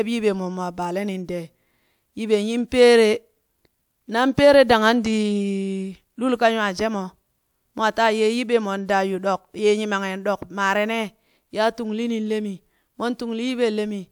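No technical faults can be heard anywhere in the recording. Nothing in the signal path stands out at any point in the speech.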